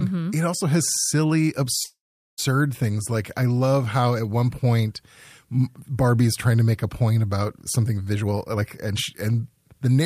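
At 1.83 s the speech stops and a call audio freeze runs until 2.40 s. The last sound continues briefly as a fading buzz or hiss before dropping to silence for about 420 ms. The likely cause is packets stalling in transit and the jitter buffer running dry, so the receiver filled the gap. When audio resumes it picks up where it left off, with nothing lost, but playback now runs 544 ms later than before.

From 8.12 s to 10.00 s there is a jitter buffer speed-up. The receiver is working off excess buffered delay by repeatedly cutting out short fragments one or a few pitch periods long. Over this stretch that removes roughly half a second of audio. The speech plays at 126 percent of its normal rate while the pitch stays unchanged, so it sounds noticeably hurried through to the end.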